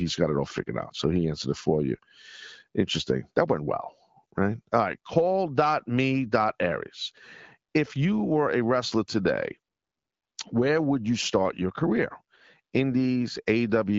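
Nothing is technically wrong with this speech clip, which carries AMR wideband (HD Voice) coding at 12.65 kbit/s working as intended.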